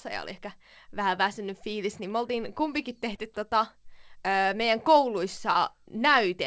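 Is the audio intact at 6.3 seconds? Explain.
Yes, the speech at 6.3 seconds is intact, with no dropout, glitch or other fault at that moment, only the call path's normal band limit, which leaves nothing above 8 kHz.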